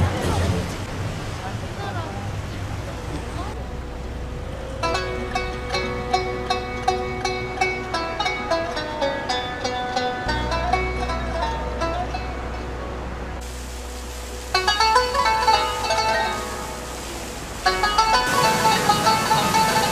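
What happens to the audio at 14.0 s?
Nothing goes wrong at 14.0 s; the audio plays through that moment intact, with no dropout, click, distortion or other fault.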